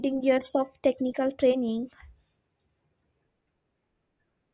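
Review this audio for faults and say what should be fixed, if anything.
No faults; nothing to fix.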